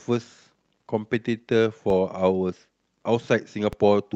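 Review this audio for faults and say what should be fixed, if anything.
A DC step occurs at 1.90 s, where the waveform's zero line jumps to a fixed offset and holds until it steps back at 3.73 s. Each transition is heard as a low thump while the speech continues unchanged. The shifted baseline also wastes headroom in between.

Fix it with a DC-blocking high-pass filter, and keep converters from recalibrating or offset-carrying inputs from being switched in during recording.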